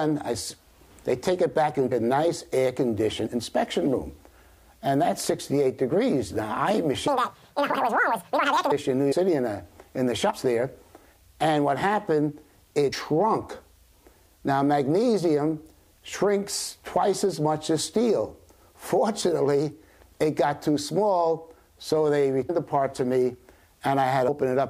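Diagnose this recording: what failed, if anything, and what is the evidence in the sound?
Compressed frames skipped, a codec or storage fault: the audio jumps forward at 1.91, 3.25, 9.11, 10.29, 12.92, 16.12, 22.49 and 24.27 s, losing roughly 50 to 200 ms each time. That is whole multiples of a 23.2 ms frame, which fits 1024-sample frames at 44.1 kHz. Each jump is a splice at a frame seam rather than a silent gap, unlike a buffer dropout.

Section at the wrong speed, at the editing or playback stage: from 7.08 to 8.72 s the audio runs 1.96 times fast and sits about ten semitones high. The likely cause is a clock mismatch during editing or playback. Tempo and pitch rise together, which rules out a pitch-shift effect that would keep the timing intact.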